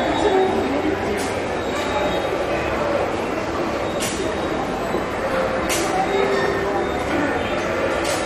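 Everyday sounds here come across dull, with a gurgling, granular roughness running through the whole clip and nothing at all above about 13.3 kHz. The upper sub-bands seem to flicker in and out while what remains is coarsely quantised. That points to heavy MP2 compression, likely at a starved bitrate that fits roughly 56 kbps, where MPEG Layer II runs short of bits, shuts off its top bands and grinds the rest into audible grain.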